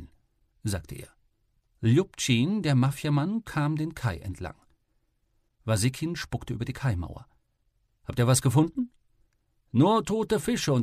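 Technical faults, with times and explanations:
Nothing technical stands out here; the audio comes across without any faults to point to.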